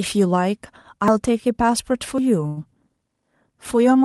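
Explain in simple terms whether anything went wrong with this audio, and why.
At 1.08 s the speech jumps ahead, likely a dropped buffer (overrun): roughly 40 ms was lost, with no gap or stretched sound. From 2.47 to 2.59 s a sound is held about 94 ms too long, a short stall from a late packet. Nothing is skipped; the speech resumes where it stopped.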